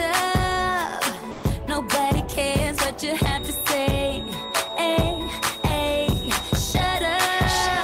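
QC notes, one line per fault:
1.31–1.43 s, sound dropped by the voice detector: for 120 ms the sound gives way to flat, steady low-level noise, likely because a discontinuous-transmission detector judged it background and stopped sending. On a spectrogram, a gap of featureless broadband noise appears. The waveform collapses to a thin band.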